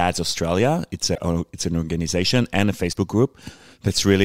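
At 1.14 to 1.18 s and again at 2.91 to 2.96 s the speech skips forward and each join is covered by a brief disturbance lasting a little under two 26 ms frames. The likely cause is a broken MP3 bit reservoir: after frames went missing, the following frames read their borrowed bits from the wrong data. On a spectrogram each spot shows as a narrow break in the harmonics. The waveform shows a sudden discontinuity there.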